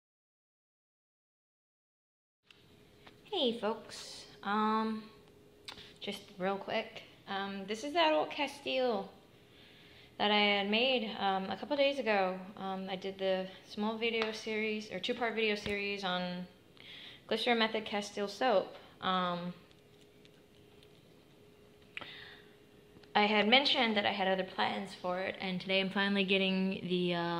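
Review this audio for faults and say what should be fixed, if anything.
No faults turn up in this audio, so nothing needs to be fixed.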